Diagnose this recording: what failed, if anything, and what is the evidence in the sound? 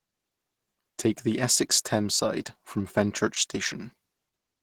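The codec stage failed, and the damage runs through the whole speech clip: the sound is muffled and hoarse, with a rough, grainy texture where clean harmonics should be. That character points to Opus compression, likely at a starved bitrate near 16 kbps, where the encoder shifts into its hybrid speech mode. On a spectrogram the harmonic striations look smeared and broken into noisy patches, especially in the upper bands. The waveform looks fairly normal.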